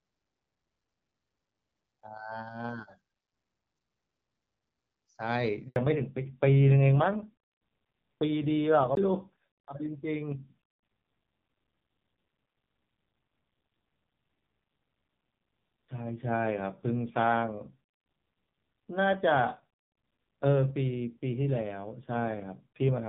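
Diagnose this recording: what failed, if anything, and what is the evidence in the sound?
Network stage: a handover gap. The call was passed from one network to another and no speech frames arrived while the link switched. The speech fades out within a few tens of milliseconds at 5.68 s and stays silent for 80 ms until the new connection picks up at 5.76 s. Whatever was said in that window is simply gone, not concealed or smeared.

Codec stage: a fallback to narrowband, starting right at the handover at 5.76 s and lasting to the end. Before the switch, the HD Voice wideband codec carries clear, light-damage speech with its top octave intact. After it, nothing remains above 4 kHz, and the speech turns dull, muffled and somewhat raspy. That combination fits an AMR narrowband codec at a low rate around 5.9 kbit/s replacing AMR-WB at 12.65 kbit/s.

Playback/storage stage: two CD skips, where a knock or disc flaw made the laser jump to another turn of the spiral and resume from a different point. 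Each is heard as a tick with a brief mute and a discontinuity in the speech. The first comes at 8.95 s with a mute of roughly 15 ms. The second, at 15.88 s, is shorter, only a few milliseconds.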